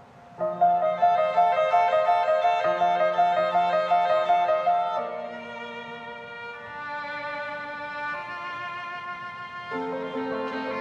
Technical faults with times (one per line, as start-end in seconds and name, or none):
none